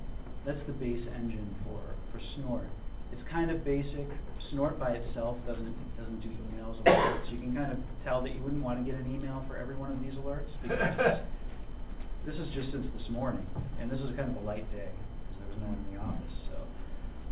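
Nothing goes wrong anywhere here; what you hear is the usual narrow sound of a call connection that tops out around 4 kHz, which fits a G.711 mu-law phone codec working as it normally does.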